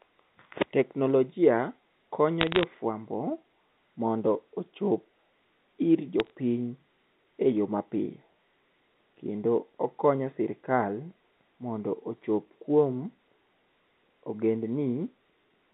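From 2.41 to 2.63 s, bit errors on a digital phone line cause a burst of sharp ticks and crackle. Flipped bits corrupt single samples. A weaker patch follows at 6.2 to 6.3 s. The narrow telephone band continues underneath.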